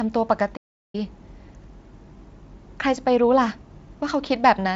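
Speech that cuts to silence from 0.56 to 0.95 s, a gap of about 0.37 s, then picks up again, a playback stall likely caused by the player running short of data or its thread being held up. The Speex-coded audio, at 34 kbps, shows at most faint codec damage.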